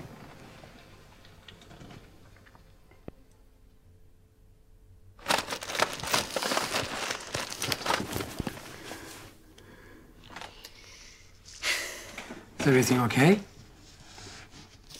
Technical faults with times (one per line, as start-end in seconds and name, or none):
3.08-3.11 loud pop
8.16-8.42 loud pop